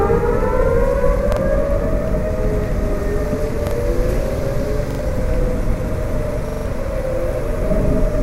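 Repeated buffer faults interrupt the sound four times. Each is a short stutter where one chunk of about 43 ms plays again with a hard join. That chunk length fits a 2048-sample buffer. New audio arrived late, so the device replayed the last chunk. It repeats once at 1.32–1.37 s and 3.67–3.71 s, twice at 4.91–4.99 s, and four times at 6.49–6.66 s. The longer runs lose more audio, up to roughly 150 ms.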